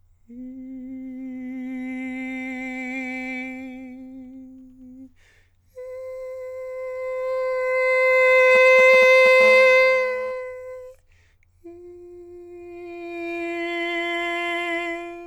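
A 2G phone close to the equipment starts sending short groups of radio bursts between 8.55 and 9.42 s, and the audio circuitry rectifies them into the music. These GSM signalling bursts come through as a galloping dit-dit-dit pattern of brief buzzes pulsing at 216.7 Hz, roughly 10 dB below the music. That makes them an intrusion with its own rhythm, unrelated to the playing.

From 9.43 to 10.32 s the phone moves into a call and transmits its bursts continuously at the same 216.7 Hz rate. The rectified pulses become a steady GSM phone buzz: a hard, raspy tone rich in harmonics that runs unbroken for almost a second. At about 19 dB below the music it is quieter than the signalling bursts before it. It comes through as a harsh edge with no musical relation to the material.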